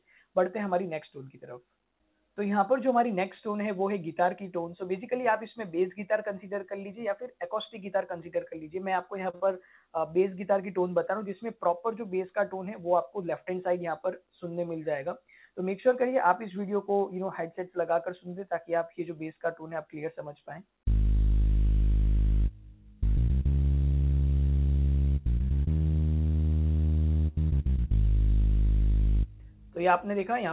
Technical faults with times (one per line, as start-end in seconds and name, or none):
9.30-9.35 short stall from a late packet
9.35-9.55 short concealed packet loss
13.22-13.71 jitter buffer speed-up